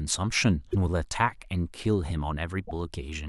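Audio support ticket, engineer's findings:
Damaged data in a compressed stream, speech clip. Corrupted bytes in the encoded stream; decoder misparses frames, loses sync, rescans for next valid header. Symptom: short glitch in the speech. Events: 0.69–0.75 s and 2.65–2.71 s, each roughly 60 ms. Probable component: transport or storage layer feeding the decoder, not the decoder itself. Check stream integrity and checksums upstream.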